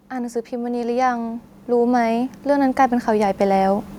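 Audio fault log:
0.09 to 3.93 s, automatic gain rising: the speech and the room noise behind it swell together, climbing steadily by about 16 dB across nearly four seconds, so the sound ends far louder and closer than it began. An automatic gain control judged the input too quiet and kept raising its gain. Because the boost acts on the whole signal, the background rises in lockstep with the voice rather than staying put beneath it.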